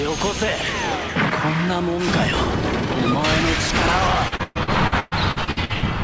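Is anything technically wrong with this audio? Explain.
Yes. From 4.28 to 5.85 s there is repeated packet loss, with a robotic sound. Successive packets go missing and each hole is patched by stretching the preceding audio. Gaps up to 120 ms leave about 42% concealed, so the audio turns choppy with pieces missing. The band stops at 8 kHz, consistent with a G.722 call path.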